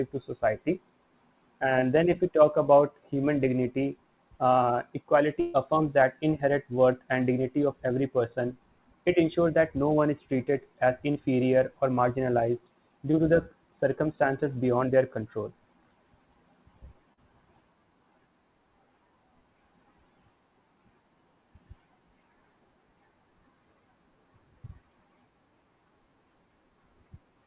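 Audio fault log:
1.80–1.84, 11.12–11.17, 13.11–13.15 and 17.13–17.19 s, short concealed packet loss: each is a brief smear or wobble lasting a few hundredths of a second, the first just before "then if we talk" and the third between "or marginalized" and "to the circumstances beyond". About 20 to 40 ms of audio failed to arrive in time, and the receiver papered over the gap by extending the preceding sound, pitched or noisy, before crossfading back into real audio.
5.40–5.56 s, burst of packet loss: after "about human dignity uh" the sound turns into a held, fading buzz or hiss for roughly a seventh of a second, then jumps ahead to "affirms that inherent worth". A run of packets totalling about 140 ms was lost, so the receiver stretched the last sound while lowering its level and then resumed further on, leaving the stretch in between missing. The narrowband sound with nothing above 4 kHz fits the telephone-grade G.711 codec on this call.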